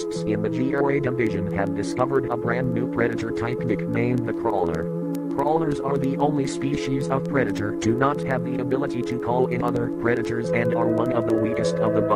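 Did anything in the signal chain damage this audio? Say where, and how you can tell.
Yes. Word clock ticks come from the digital link stage, 0.13 s to 12.11 s, roughly every 0.07 s. An unlocked receiver clock, about 300 ppm off, slips a sample.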